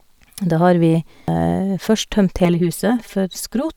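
Damaged data in a compressed stream appears at 1.28 s as a brief chirp or blip cutting into the speech. Part of the encoded stream at this point is corrupt, so the decoder cannot read the affected frame correctly. It loses its place in the stream and has to find the next valid frame header before normal decoding resumes. The bad frame passes through as a short burst of wrong audio.

Channel delay (comb filtering) sets in at 2.45 s and lasts to the end of the clip. One channel arrives about 5 ms after the other, and the two are summed to mono. Content common to both channels then cancels at regularly spaced frequencies, with the first notch near 100 Hz and further notches at odd multiples above it. The speech takes on a hollow, phasey colour from these fixed notches.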